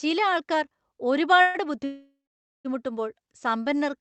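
At 1.41 s and again at 1.85 s the speech hits a call audio freeze, most likely from packets held up in transit so the jitter buffer ran dry. The first, 0.13 s long, stretches the last sound into a fading buzz or hiss. The second lasts 0.8 s and decays into about 0.51 s of silence. Unlike a dropout, the speech resumes exactly where it halted, with nothing lost, only pushed later.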